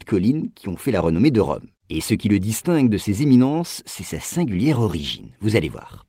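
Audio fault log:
There is no fault to log in this speech audio.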